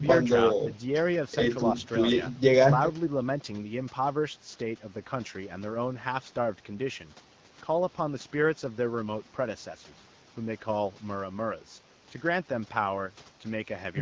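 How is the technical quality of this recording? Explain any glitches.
No glitches can be heard anywhere in this recording.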